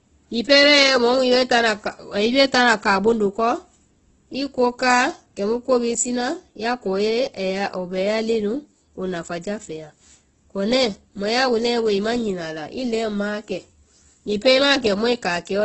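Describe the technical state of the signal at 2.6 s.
At 2.6 s the speech carries the same damage heard across the whole clip, most likely Opus compression. Nothing sounds above about 8.1 kHz, and the speech is grainy and rough rather than swirling. That points to Opus's music (CELT) mode at a very low rate, in line with around 12 kbps, where starved bands are filled with folded or noise-like content instead of being left empty. That filling is why it lacks the watery, hollow warble of MP3.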